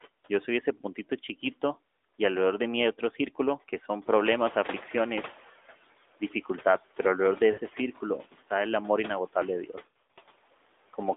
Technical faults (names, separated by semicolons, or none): lost AMR speech frames